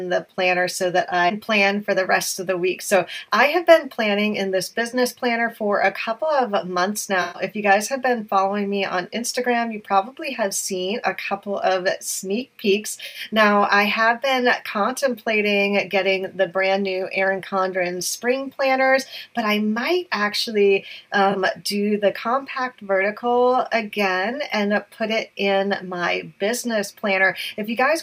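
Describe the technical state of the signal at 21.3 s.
AAC frame loss with concealment, 21.32 to 21.35 s. About 21 ms goes missing, likely one frame. The decoder patches it from the previous spectrum, leaving a brief smeared blip.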